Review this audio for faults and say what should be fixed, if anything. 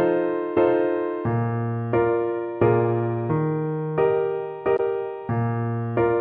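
There's one spot to fix: a burst of damaged data in a compressed stream at about 4.74 to 4.80 s. It's a short, harsh blip lasting roughly 56 ms. That's the sound of the decoder hitting frames it can't read correctly, because bytes there have been lost or overwritten, so it loses sync and hunts for the next valid frame header before playback settles again. To prevent it, add checksums or error detection when storing and transferring the file, and re-fetch or re-encode from the source if a check fails.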